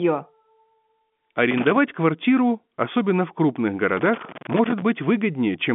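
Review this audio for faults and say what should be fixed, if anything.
Two irregular bursts of scratchy crackle break up the speech, from 1.50 to 1.78 s, just before "квартиру особенно в крупных", and again from 3.93 to 4.82 s, right after those same words. This is loose connector crackle: a worn or dirty contact in the cable or jack makes and breaks as it moves, chopping the signal on and off. The second, longer burst points to the plug being disturbed for nearly a second. The telephone-band limit near 3.7 kHz comes from normal G.711 line coding and is not part of the fault. To prevent it, clean or replace the suspect connector and secure the cable so it cannot shift during recording.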